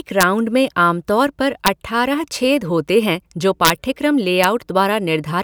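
Speech with integer overflow on its loudest peaks: sharp, violent cracks at 0.21–0.23 s, 1.66 s, 3.65–3.70 s and 4.44 s, where the level pushes only about 0 to 2 dB past full scale. Instead of being limited, each sample that exceeds the integer range wraps to the opposite extreme. On a waveform the tops of these peaks jump straight across to the far rail. A spectrogram shows bright, full-height vertical streaks at each event, harsher than the flat tops of clipping.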